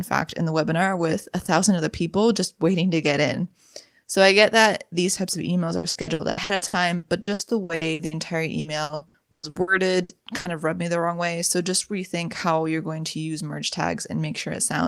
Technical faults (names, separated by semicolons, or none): repeated packet loss (robotic sound)